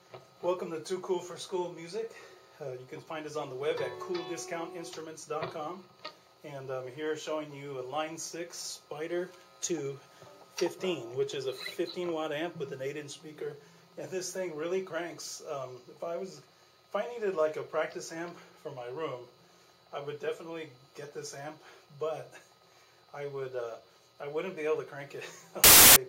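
From 25.64 to 25.96 s, near the very end, the audio turns into a loud burst of harsh broadband noise lasting about a third of a second. These are samples built from the wrong bytes: the reader misassembled each sample, so the rapidly changing low bits became the dominant part of every value.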